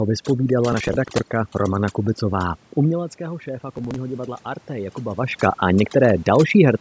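A noise reduction stage set far too aggressively runs through the whole recording, which is overdone noise removal. Whenever a frequency band falls near its noise estimate, the processor pulls it down hard or shuts it off, taking quiet parts of the speech along with the room noise. The background collapses into near silence dotted with twinkling, chirpy specks.

From 0.73 to 1.20 s there is processor overload crackle. The processor couldn't finish its audio buffers on time, and the sound points to a long run of missed deadlines on the order of twenty, each fitting a buffer of roughly 15 ms. Every missed buffer was simply skipped, so the audio jumps forward with hard-edged gaps, heard as a gritty, tearing crackle riding on the speech.

Just after 3 s the talker moves away and the input drops by about 12 dB. The automatic gain rising then follows from 3.18 to 5.42 s. The gain control judged the level too low and lifted its gain slowly by about 4 dB, so speech and background swell together over a couple of seconds instead of jumping.

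From 3.76 to 3.96 s a second burst of processor overload crackle lands inside that swell. It points to a shorter run of skipped buffers, again around 15 ms each, and is heard as a brief stretch of the same tearing grit.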